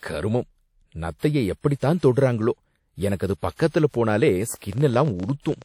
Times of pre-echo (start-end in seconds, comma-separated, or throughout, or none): 3.55-3.59